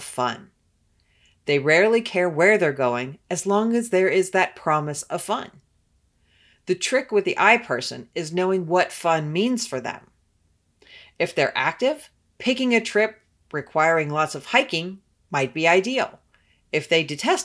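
No technical faults can be heard anywhere in the recording; the signal stays steady and intact from its opening to its close.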